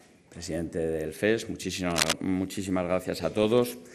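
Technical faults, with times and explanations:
throughout, MP2 compression: The sound is dull and muffled, with a gurgling, grainy roughness. This is likely low-rate MPEG Layer II coding, which fits a rate around 80 kbps. Starved of bits, the codec shuts off upper sub-bands and coarsely quantises the rest.
1.90 to 2.14 s, cable scratch noise: A dense, uneven rustling scratch sits over the sound, roughly as loud as the sound itself. A worn cable, connector or control being moved is the likely cause, with its contact resistance jumping rapidly and injecting bursts of noise.
3.26 to 3.45 s, DAB burbling: A short patch of burbling noise blips breaks through the sound. Bit errors from weak reception slipped past error correction into the coded data, corrupting samples across what fits around eight frames.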